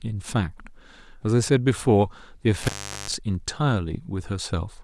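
At 2.62 s the speech drops out suddenly. This is an intermittent contact fault. A loose plug or cable lead loses its connection for a moment, so the signal path opens. The line stays open for about 0.39 s. During that gap the speech is gone, and only faint hiss remains. Crackle marks the break where the contact opens and again where it closes. The connection is restored by 3.15 s, and the speech returns.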